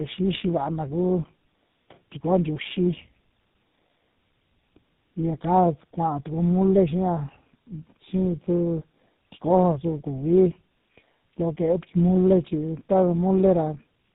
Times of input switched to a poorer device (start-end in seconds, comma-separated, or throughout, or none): none